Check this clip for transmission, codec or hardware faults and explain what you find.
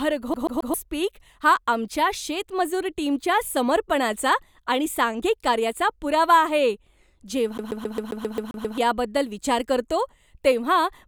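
CD stuck on one turn at 0.34 to 0.74 s and 7.58 to 8.78 s: a scratch returns the laser to one track, so a 133 ms slice of speech repeats 3, then 9 times, in a rapid, even stutter.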